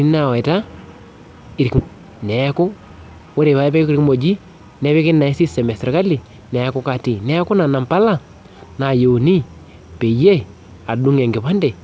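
At 1.78 to 1.80 s there is a skip ahead: roughly a second of audio never plays, and playback jumps straight to later material with no fill and almost no gap. The join is abrupt, so the sound seems to lurch forward. The lost stretch was most plausibly discarded when a backlog of audio had built up, and dropping it cuts the end-to-end delay by about a second in one step.

From 1.88 to 6.23 s a jitter buffer speed-up follows. Playback runs at about 111% while the pitch stays the same, so the audio sounds hurried. The receiver is trimming many short slices, each one or a few pitch periods long, to drain excess buffered audio. Over those four seconds or so, about half a second is taken out. Throughout, nothing is heard above 8 kHz, which fits a wideband call codec such as G.722.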